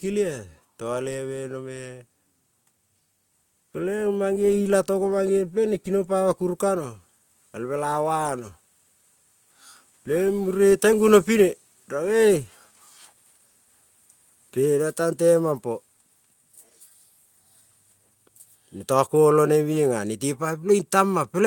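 Speech recording with no technical faults detected.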